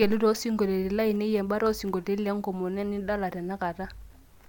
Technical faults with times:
none

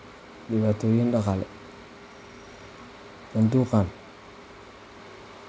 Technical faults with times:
none

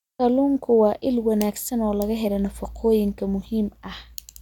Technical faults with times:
none

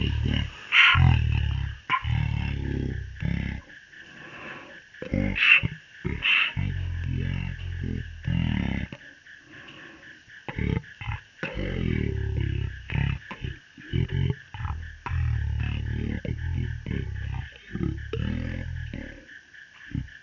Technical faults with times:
0.00-20.22 wrong sample rate

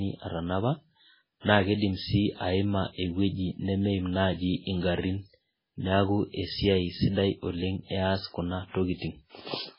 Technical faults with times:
0.00-9.78 MP3 compression

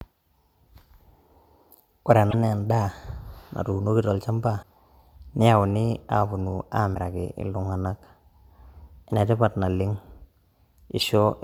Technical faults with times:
2.29-2.34 damaged data in a compressed stream
4.59-4.63 damaged data in a compressed stream
6.91-6.97 damaged data in a compressed stream
11.00-11.03 damaged data in a compressed stream

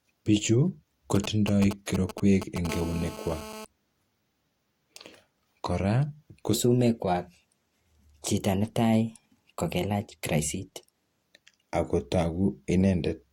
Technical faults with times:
1.15-2.67 GSM signalling bursts
2.69-3.65 GSM phone buzz
6.54-11.23 section at the wrong speed

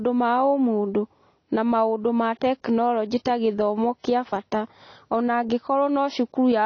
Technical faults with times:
0.00-6.65 AAC compression

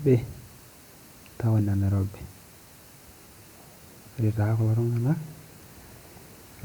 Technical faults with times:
none

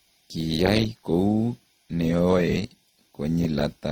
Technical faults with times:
0.00-3.92 transcoding between lossy codecs

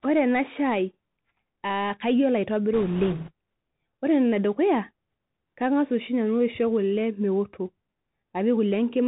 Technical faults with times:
0.00-9.07 Bluetooth CVSD headset codec
2.74-3.31 bit errors on a Bluetooth voice link

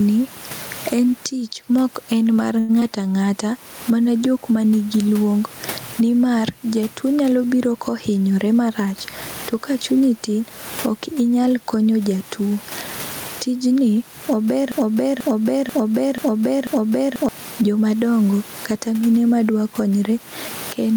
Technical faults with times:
0.00-20.96 gain pumping
2.59-2.71 short stall from a late packet
2.80-2.91 short concealed packet loss
8.08-8.94 jitter buffer speed-up
14.72-17.29 broken-record loop

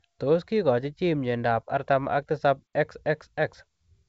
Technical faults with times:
none

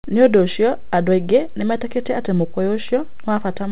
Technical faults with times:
none

